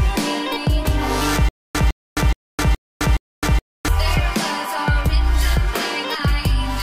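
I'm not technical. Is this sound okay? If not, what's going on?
No. From about 1.49 to 3.88 s there's a stutter with silent gaps: the same short burst of sound, about 0.16 s long, plays five times, each followed by about 0.26 s of dead silence, so it pulses evenly every 0.42 s. The player or stream likely stalled and kept replaying its last fragment. Unlike a plain dropout, which is just a hole, this repeats the same piece, and whatever should have played there is gone.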